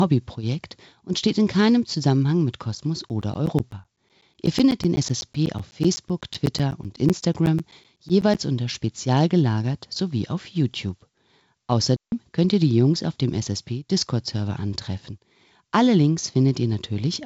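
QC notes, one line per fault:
3.09–8.35 s, periodic USB or driver dropouts: a steady train of ticks every 0.125 s, about forty in all, each a gap of around 10 ms filled with silence. A background task is stalling the USB bus or audio driver at a fixed interval, so small slices of signal vanish on schedule.
11.96–12.12 s, digital wireless dropout: a clean hole of near silence lasting about 158 ms, with no noise burst on either side. The wireless link lost too much data and the receiver muted with a very short fade instead of passing corrupted audio.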